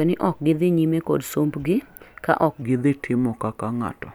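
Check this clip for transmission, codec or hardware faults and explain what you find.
One fault is present: a section at the wrong speed, running from 2.62 s to the end of the clip. From that point the speech plays at about 0.84 times its recorded speed, so timing stretches and pitch drops together by about three semitones. The voice turns deeper and slower in a single step rather than drifting. The likely cause is that this section was played back or resampled against the wrong clock rate.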